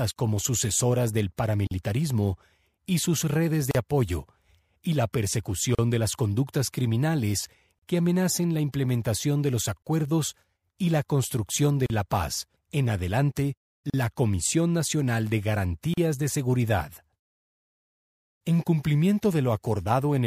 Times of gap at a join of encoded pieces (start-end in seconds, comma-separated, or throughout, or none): 1.67-1.71, 3.71-3.75, 5.75-5.79, 7.79-7.82, 9.82-9.86, 11.86-11.90, 13.90-13.94, 15.94-15.97